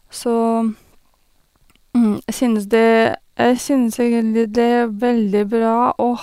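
At 2.76 s the pace suddenly drops and stays that way to the end: the speech runs at roughly 0.66 times its earlier speed while the pitch doesn't budge. That's a time-stretched section, likely from software lengthening the audio to fill a slot by repeating short slices of it instead of resampling. Because it's slowed, the tail drags, with syllables drawn out.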